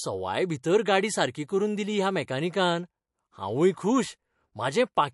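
Throughout, the speech sounds watery and swirly from likely MP3 compression at a low bitrate near 48 kbps. A spectrogram shows a sharp 11.3 kHz ceiling and flickering gaps below it.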